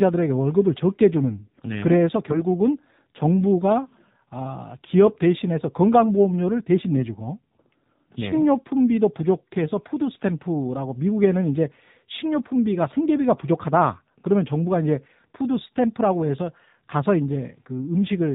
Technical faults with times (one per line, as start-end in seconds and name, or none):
0.00-18.35 AMR narrowband mobile codec
2.28-2.44 AMR bit errors